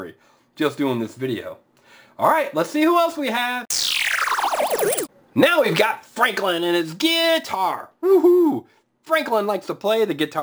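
From start to finish, a gritty, inharmonic buzz or fizz follows the louder and brighter sound, about 20 dB below it. This is crude rate conversion, which fits 32 kHz material resampled to 44.1 kHz by repeating samples unfiltered, creating shifted, inharmonic copies.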